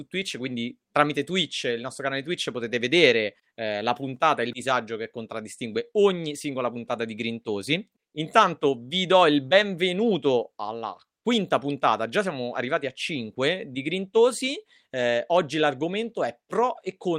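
Listening through the recording, nothing stood out as a technical fault at any point.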